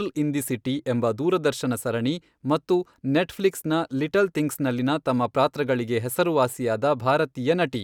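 No technical faults are audible anywhere in the speech.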